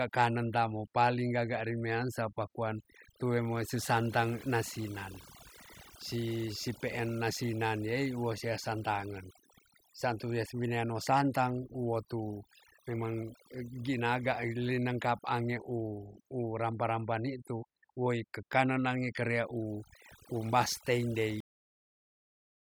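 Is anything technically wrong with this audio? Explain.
Yes, there are two faults in this speech recording.

Overdone noise removal runs through the whole clip. The noise reducer was set so aggressively that it pulls individual frequency bands down to nothing whenever they sit near its noise estimate, and the softer parts of the voice are removed with the hiss. The gaps become an unnatural near-silence scattered with twinkling, chirpy specks. Plain low-bitrate coding also smears detail, but it doesn't empty the background into that sparkling hush between phrases.

A cut-off end occurs at 21.40 s. The final buffers never reached the output, so the sound stops mid-utterance and drops straight to digital silence, which lasts to the end of the file at about 22.7 s. Nothing decays or trails off first. A deliberate fade or a natural pause would taper, and a dropout would have audio resume afterwards. 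Here the signal simply ends abruptly and never returns.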